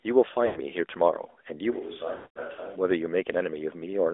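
Throughout, the sound is confined to roughly 300 Hz to 3.6 kHz, the mark of the AMR narrowband mobile codec. The buzzy, synthetic edge fits a mid-rate mode near 10 kbps. This is codec damage rather than a simple band-limiting filter: it is a vocal-tract model rebuilding the signal.

From 0.46 to 0.60 s come lost AMR speech frames, about 100 ms in all. The decoder repeats its last good settings at falling gain, so the sound smears and warbles briefly. A plain dropout would cut to silence hard, whereas this tails off.

At 1.73 s there is a sudden change to a roomy, hollow, thinner sound, about 10 dB quieter, with room noise about 25 dB below the speech behind it. It snaps back at 2.75 s. This is likely a switch to a distant microphone. An ordinary level drop would keep the same tone, but here the room sound and the loss of bass change too.

Inside that stretch, from 2.16 to 2.41 s, a longer run of lost AMR speech frames (about 200 ms) drags the sound out and fades it to silence. 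It returns weak or rough.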